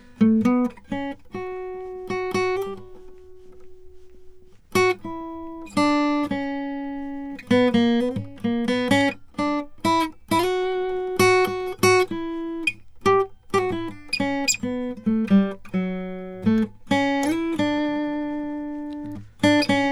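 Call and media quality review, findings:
Nothing to flag on this music clip; no faults turned up anywhere in it.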